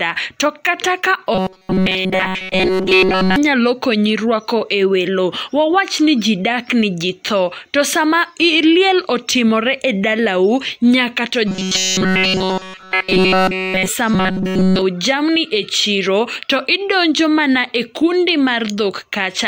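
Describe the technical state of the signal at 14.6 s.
At 14.6 s the speech has collapsed into a rigid, metallic buzz pitched at 188 Hz, a robotic sound from repeated short buffers that runs from 14.14 to 14.82 s and loops essentially throughout that span. The likely cause is audio arriving too slowly: playback keeps replaying the last fragment, about 5.3 ms long to match the 188 Hz buzz, while the real signal is skipped, leaving only a rough outline of the speech.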